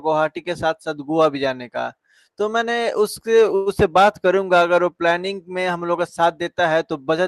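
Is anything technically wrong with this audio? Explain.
Yes. From 3.55 to 3.69 s there is a call audio freeze: a brief buzz fills 108 ms, likely from delayed packets draining the jitter buffer. The speech then resumes intact but later.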